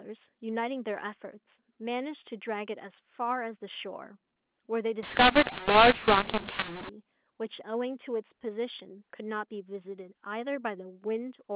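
From 5.03 to 6.89 s the speech turns harsh and distorted, with noise filling the pauses: a mu-law and A-law mix-up, where A-law telephone samples are decoded as mu-law. Levels scramble, some too loud, others too soft, and near-silent samples rise well above silence.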